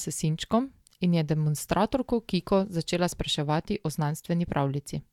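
A short speech recording with no audible technical faults anywhere in the signal.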